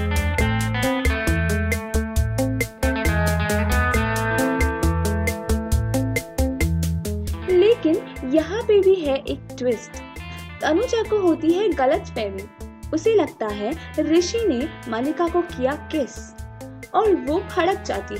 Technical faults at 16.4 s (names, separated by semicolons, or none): none